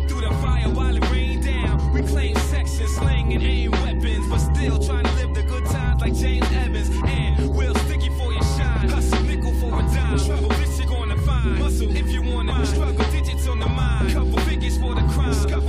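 At 12.51 s a brief glitch marks damaged data in a compressed stream: corrupted bytes made the decoder misread a frame and lose sync until the next frame header. Unlike a plain dropout or click, it comes from the decoder losing its place in the stream rather than from a fault in the signal itself.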